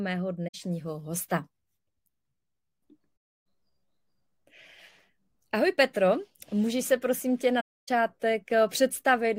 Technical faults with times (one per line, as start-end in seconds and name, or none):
0.47-0.55 AAC frame loss with muting
3.16-3.45 AAC frame loss with muting
7.60-7.89 AAC frame loss with muting